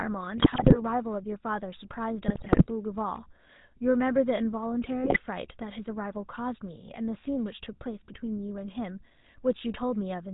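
A buzzy, gravelly roughness colours the whole speech recording, with nothing above 4 kHz. This is GSM full-rate codec damage, plainly audible and consistent with the 13 kbps full-rate coder, which models the vocal tract and drives it with a sparse, regularly spaced pulse excitation. On top of that, the voice breaks into squawks, pops and gargling from 0.38 to 0.77 s, 2.28 to 2.71 s and 5.04 to 5.19 s. These are GSM bit errors. The amount of damage points to an error rate of a few percent. The flipped bits corrupt the decoder's filter, pitch and gain values, so the spectrum warps or the level jumps frame by frame.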